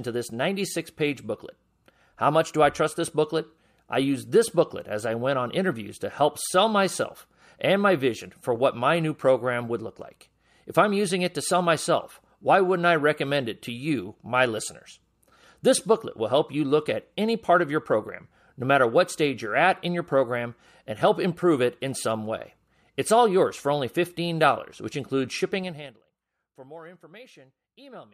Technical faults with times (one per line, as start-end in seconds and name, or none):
25.54-26.01 zipper noise